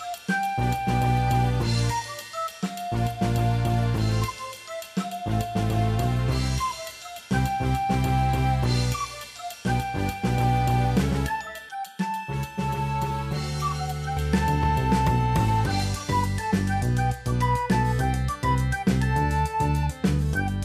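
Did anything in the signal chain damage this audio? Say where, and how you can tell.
Yes. Channel delay with comb filtering runs from 11.69 to 14.17 s, where the sound turns hollow and phasey. One channel arrives about 5 ms behind the other, and when the two are summed to mono, material common to both cancels at evenly spaced frequencies. The first notch sits around 100 Hz, and further notches repeat up the spectrum. A fixed offset of a few milliseconds points to a buffer misalignment between channels at the driver or buffer stage.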